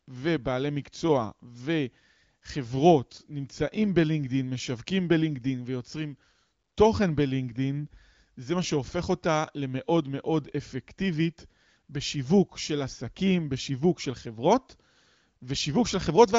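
No technical faults are audible.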